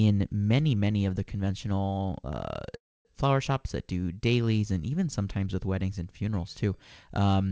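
At 2.76 s, right after "of the conventional uh", the speech hangs: a brief tail of the last sound smears out and then there's about 270 ms of near silence before "flower shops that do" picks up at 3.07 s. That's a call audio freeze. Packets were likely held up in transit, so the jitter buffer ran dry and the receiver padded roughly 0.3 s. Nothing's lost, just shifted later. The wideband call path tops out at 8 kHz, consistent with G.722.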